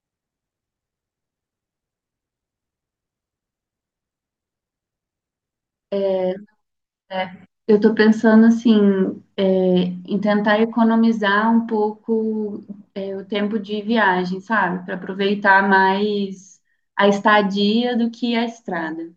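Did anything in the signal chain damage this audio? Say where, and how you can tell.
No, nothing in the chain damaged it.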